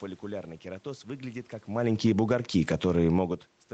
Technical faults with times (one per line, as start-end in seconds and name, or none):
1.90-2.91 automatic gain falling
2.28-3.34 automatic gain rising